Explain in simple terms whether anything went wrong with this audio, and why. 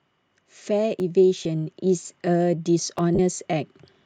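Three things went wrong in this speech. First, automatic gain rising: from 0.34 s to about 3.79 s the level creeps up steadily as the gain control decides the input is too quiet and keeps turning it up.

Second, tiny skips at 1.00 s, 1.99 s and 2.99 s, about once a second. That's likely audio missing between chunks, with a few milliseconds dropped each time a new block starts.

Third, lost LE Audio frames: a brief 10 ms blip at 1.44 s and a longer 40 ms smear from 3.15 to 3.19 s, where the Bluetooth decoder had to fill in noisy guesses.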